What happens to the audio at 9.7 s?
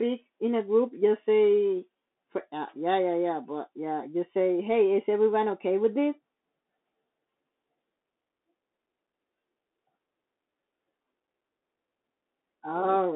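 At 9.7 s the speech is still passing through the Bluetooth CVSD headset codec, present across the whole clip. Its one-bit delta coding, consistent with a 64 kbps link, confines the band to roughly 250 Hz–3.6 kHz, leaving scratchy sibilants and a granular hiss. A spectrogram shows a flat ceiling near 3.6 kHz with empty space above.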